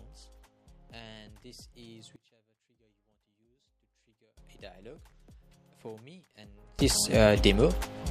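A sudden gain jump, likely from a digital gain change applied without any ramp, drops the level by about 24 dB at 2.16 s until 4.37 s, then raises it by about 24 dB from 6.79 s to the end. Sound and background noise shift together instantly.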